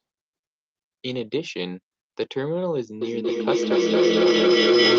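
From 3.02 s to the end, a feedback howl takes over. The loop from loudspeaker back into microphone is gaining level on each pass, so the repeats grow rather than decay. It narrows to a tone around 400 Hz, pulsing roughly every fifth of a second, and peaks about 10 dB above the speech.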